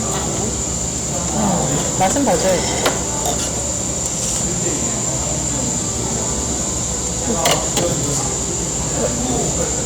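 Hard clipping runs through the whole clip: the signal is driven about 21 dB past what one stage can pass, so every peak is sliced flat. Only a small fraction of samples, around 1.5 percent, hit the limit, yet the flattened tops add high harmonics, heard as harsh fuzz on each loud sound.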